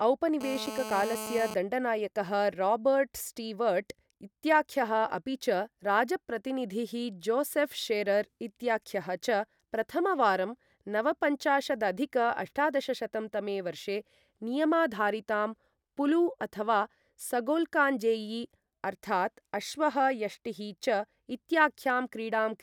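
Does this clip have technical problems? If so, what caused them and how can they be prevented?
Yes, there's GSM phone buzz from 0.41 s to 1.54 s, a hard, raspy buzz at about 217 Hz with lots of harmonics, sitting roughly 10 dB below the speech and holding steady, which fits a 2G phone on a call nearby. The handset transmits in bursts 217 times a second, and the audio circuitry rectifies those radio pulses into audible buzz. Keeping phones switched off or well away from mics, cables and preamps prevents it.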